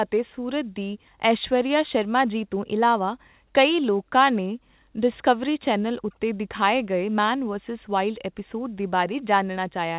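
No technical faults occur anywhere in the recording, which comes through a call path that keeps nothing above 4 kHz, as a G.711-style telephone codec would.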